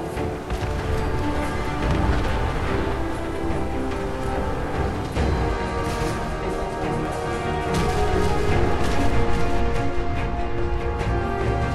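From 7.05 to 9.59 s, a doubled audio track appears. A second copy, roughly half a second late and a few dB quieter, starts and stops abruptly, likely from a second capture path.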